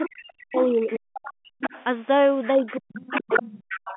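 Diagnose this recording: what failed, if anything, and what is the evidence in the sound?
A second, quieter voice from the other side of the call comes through the microphone path: a brief scrap at 0.02 to 0.1 s, again from 0.51 to 1.84 s, and from 2.44 s to the end of the clip. It starts well below the talker, about 15 dB down, and grows to only about 5 dB under by the end. This is the other side's voice leaking through, likely because the call-processing echo canceller left part of the loudspeaker signal in the microphone feed.

The talker's own speech dips hard, by roughly 40 dB at its deepest, from 0.1 to 1.52 s and again from 2.54 s to the end. Both stretches overlap the other side's voice. This is speech suppressed in double talk, which happens in the same call-processing stage. With both sides talking at once, the canceller likely could not tell its own talker from the echo and attenuated everything, so the near speech is cut down within the narrow telephone band.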